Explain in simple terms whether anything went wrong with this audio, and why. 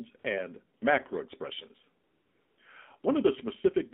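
The whole recording has gone through the AMR narrowband mobile codec, the speech codec used on older mobile phone calls. It keeps only a narrow slice of sound, roughly 200 Hz to 3.6 kHz, so everything sounds thin and boxy. It also squeezes the voice into very little data. That is why the speech sounds buzzy and a bit artificial all the way through. The damage is easy to hear.

There are also four short spots of AMR comfort noise. The phone decided nobody was talking and stopped sending the voice. The receiving end filled the gap with smooth, made-up hiss instead. This happens at 0.20 to 0.24 s, 0.80 to 0.82 s, 2.04 to 2.58 s, and 3.00 to 3.04 s. The longest gap is about half a second. The real background drops out there, and soft sounds can get clipped.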